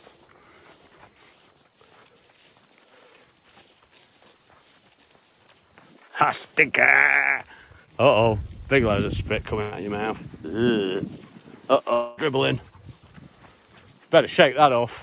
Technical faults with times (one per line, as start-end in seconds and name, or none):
7.86-7.89 short concealed packet loss
9.61-9.74 burst of packet loss
11.94-12.19 long network dropout